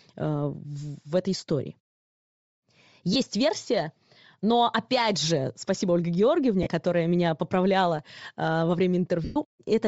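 The whole clip has a breathy, grainy top end with noise-filled highs, likely Bluetooth LC3 compression, and the damage fits low-bitrate 7.5 ms frames, around 32 kbps. Then come lost LE Audio frames, where the decoder repeats the last spectrum as a noisy smear: at 1.37–1.40 s after "в этой", at 3.13–3.16 s before "версия но опять же", at 6.63–6.67 s before "которая меня поправляла", and at 9.24–9.36 s, where it fades away.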